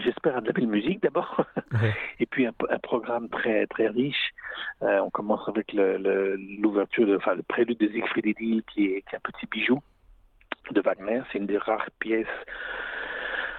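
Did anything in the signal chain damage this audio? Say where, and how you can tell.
Yes. Clock drift between sender and receiver runs through the whole clip, at the receiving end's jitter buffer. The sender's clock runs slow, by roughly one and a half percent, so audio arrives a little more slowly than the receiver plays it out. The buffer keeps draining, and the receiver has to stretch what it holds to avoid running empty. This shows up as small, unevenly spaced timing hiccups rather than any change in tone.

Repeated timing corrections run from 0.62 s to 9.37 s, at the same buffer stage. The receiver compensates for the slow sender by repeating short pieces of audio, which plays this stretch at about 99 percent speed. Across that span the repeats add roughly a tenth of a second. Each edit is tiny and all of them push the same way. They come at irregular spacing.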